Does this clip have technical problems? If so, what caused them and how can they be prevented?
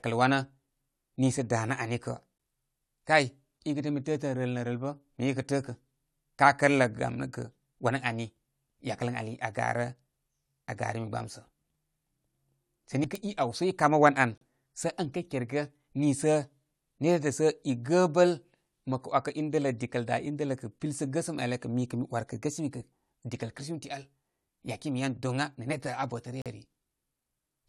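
Yes. The speech has three gaps between stream segments: a 14 ms dropout at 2.38 s, a 36 ms one from 14.38 to 14.41 s, and a 40 ms one from 26.42 to 26.46 s. The timestamps of adjacent segments didn't meet, which fits a stream cut into 4-second segments, so the player filled each hole with silence. No audio is missing; time is inserted. A waveform shows a flat line with abrupt edges, and a spectrogram shows a thin blank vertical stripe. Making each segment's start time match the previous segment's end exactly at packaging prevents this.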